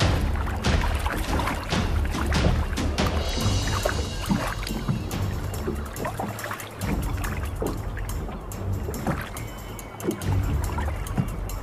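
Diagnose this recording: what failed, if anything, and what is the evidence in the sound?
No fault detected anywhere.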